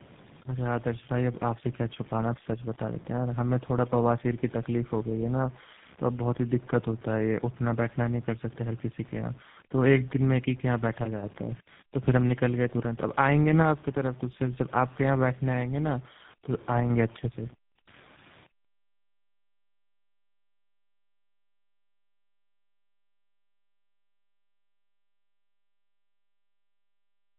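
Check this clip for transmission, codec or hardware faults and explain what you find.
Tandem speech coding is present throughout the whole clip. The artefacts point to a G.729A link, then G.711 mu-law, then GSM full rate. The second of the two low-rate speech coders re-encodes the first one's errors, so the speech is muffled, rough and warbly, with nothing above 3.8 kHz. A single narrowband codec sounds cleaner than this. The added grit and warble are what set the tandem apart.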